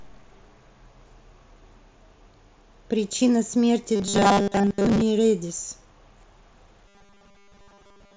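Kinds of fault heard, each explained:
Robotic sound from repeated short buffers: the speech turns into a stiff, metallic buzz pitched at 200 Hz, first from about 3.96 to 5.01 s and again from 6.88 s to the end. That pitch is what you'd get if the playback were likely starved of fresh audio and kept looping the last 5 ms chunk, so most of the real signal gets skipped. The buzz still loosely tracks the speech through the light mSBC headset graininess.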